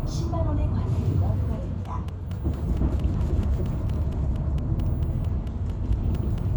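A recording of everyday sound carries a train of clicks from 1.85 s to 6.39 s: around twenty near-identical pops at a regular 4.4 per second, peaking at about the level of the sound itself and ticking through quiet moments too. Interference from nearby equipment or a faulty connection or power supply is the likely source. On a waveform they show as evenly spaced sharp spikes; a spectrogram shows thin broadband vertical lines at matching intervals.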